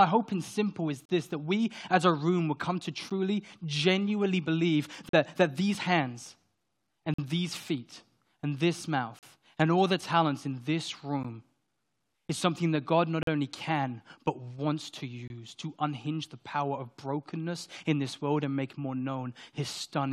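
Gaps between stream segments: consecutive 2-second segments are timestamped slightly apart, so silence fills each hole, giving hard-edged dropouts at 1.05, 3.10, 5.09, 7.14, 9.19, 11.23, 13.23 and 15.28 s, lasting 11 to 46 ms.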